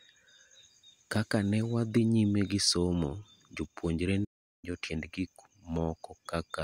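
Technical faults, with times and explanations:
4.24–4.65 s playback stall: the player likely ran out of buffered data, so the speech cuts to silence for 0.39 s after "newadhi nyime gisomo jopuonjre" and resumes at "tiend gik".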